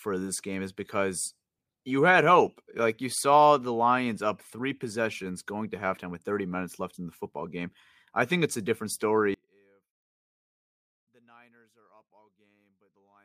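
From 9.34 s to the end at 13.25 s, the speech suddenly drops by about 37 dB when heard in mono. The centred voice nearly disappears. What remains is faint, a trace of the sound. The likely cause is one channel inverted. One side of the stereo pair has its polarity flipped. When the two sides are summed, everything they share cancels. Only their small differences survive.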